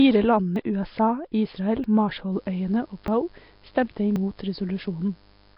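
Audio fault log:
throughout: Nellymoser compression, likely. The speech carries a rough, hissy haze and a smeared, underwater character. Small blocks coded at a fixed low bit depth leave weak bands unfunded and filled with noise, and the damage here is heavy.
0.56, 1.84, 3.08, 4.16 s: dropped buffer (overrun), likely. Each is a sudden jump forward in the speech with no gap of silence. About a tenth of a second vanishes at 0.56 and 3.08 s and roughly 40 ms at 1.84 and 4.16 s, where samples were overwritten before being collected.
2.3 s to end: mains buzz. A steady, raspy buzz enters at about 35 dB below the speech. Switching spikes twice per 50 Hz cycle produce a dense ladder of harmonics that reaches well up into the kilohertz range.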